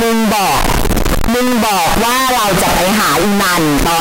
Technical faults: signed and unsigned mixed up

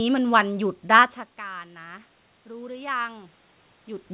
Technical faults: automatic gain rising

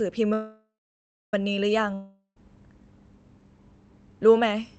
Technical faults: call audio freeze; long network dropout

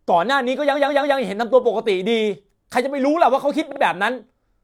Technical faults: repeated frames

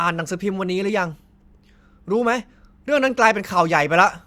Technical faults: none

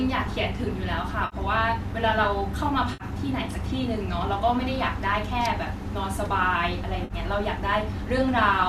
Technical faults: AAC frame loss with concealment

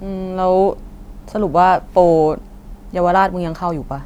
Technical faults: none

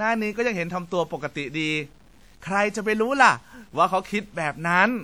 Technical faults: low bit depth without dither; WMA compression

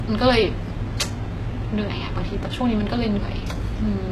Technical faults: low-bitrate audio saved at a high bitrate

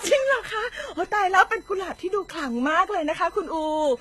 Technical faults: USB whine; transcoding between lossy codecs

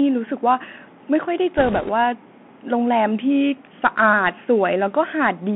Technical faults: Bluetooth CVSD headset codec; bit errors on a Bluetooth voice link; drift correction step

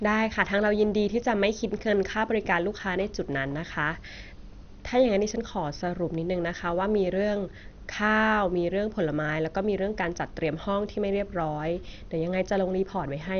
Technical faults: MP2 compression

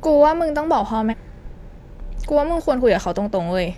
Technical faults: damaged data in a compressed stream

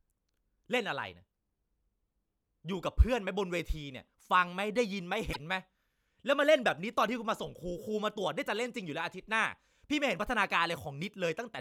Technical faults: broken MP3 bit reservoir

